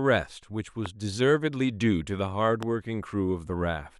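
Speech clip with two loud pops, at 0.86 to 0.88 s and 2.63 to 2.65 s, each a single thump around 10 dB above the speech, which carries on underneath rather than dropping out. The likely cause is a voltage spike, such as static or a switch.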